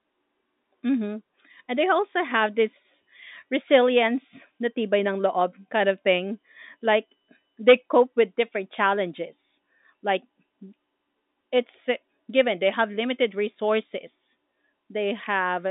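No technical faults can be heard anywhere in this speech.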